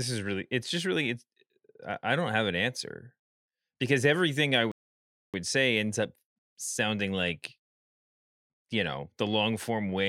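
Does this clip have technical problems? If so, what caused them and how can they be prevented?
Yes. A rebuffering stall silences the speech from 4.72 to 5.34 s, between "because everything I" and "say ends up sounding". The player waited for data, adding 0.62 s; the waveform goes flat and the spectrogram shows an empty vertical band. A deeper playback buffer prevents it.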